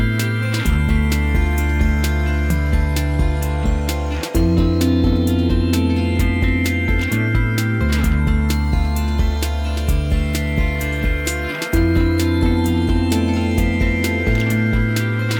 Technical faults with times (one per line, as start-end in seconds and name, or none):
none